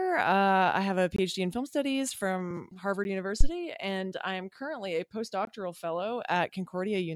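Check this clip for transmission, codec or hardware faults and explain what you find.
There are two kinds of fault here, both hardware or playback-side rather than codec.

Three blocks of digital silence show up: at 1.16–1.18 s between "have a" and "in film studies from", at 3.04 s, and at 5.45–5.47 s right after "I am currently a". The output buffer likely wasn't filled in time, so the audio drops to silence with hard edges. The two 21 ms holes fit a 1024-sample buffer, and the 11 ms tick fits 512.

There's also a phantom power thump at 3.41–3.48 s, just before "and I am currently". A supply switching on a live input sends a low thud through the coupling capacitors, and it dies away in about 17 ms.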